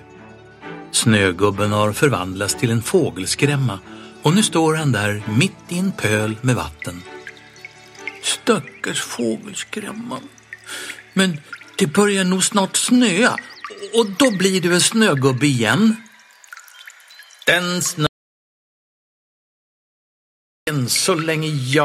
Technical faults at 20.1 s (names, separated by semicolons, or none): audio dropout to silence